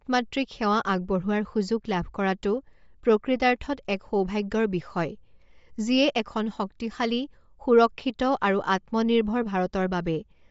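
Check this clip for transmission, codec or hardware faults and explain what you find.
One fault is present, and it runs through the whole clip. Throughout, the speech sounds grainy and breathy, with nothing above 7.6 kHz. Likely Bluetooth LC3 compression: at a low bitrate, upper bands are zeroed and refilled with noise.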